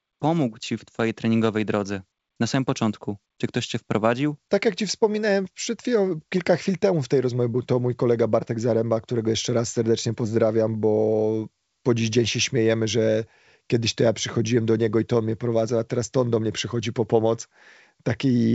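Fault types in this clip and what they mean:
Nothing stood out on listening to this speech, which comes across as ordinary wideband telephone audio at 64 kbit/s.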